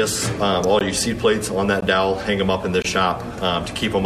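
A sharp snap lands at 0.64 s, a single hard transient about 6 ms long sitting on top of the sound rather than replacing any of it. This is an electrical switching spike: a brief arc, likely from a nearby switch, motor or static discharge, induced a voltage pulse into the audio line. Because the disturbance is so short and broadband, it reads as a click instead of a tone.

Starting just after it, the audio drops out cleanly three times, at 0.79 to 0.81 s, 1.81 to 1.82 s and 2.82 to 2.85 s. Each hole is brief (16.2 ms, 18.0 ms and 22.0 ms) with abrupt edges, and they recur roughly once per second. That regularity marks a gap between stream segments. The timestamps of consecutive 1-second segments don't quite meet, so the player inserts silence to cover the difference. No audio is lost; the timeline is stretched slightly at each boundary, and the inserted gap grows a little each time.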